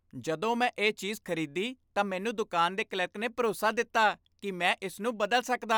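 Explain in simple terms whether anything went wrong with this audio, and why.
Nothing went wrong here: the speech runs continuously with no dropouts, glitches or distortion anywhere in the clip.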